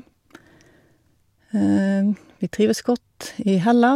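No technical faults are audible in this speech recording.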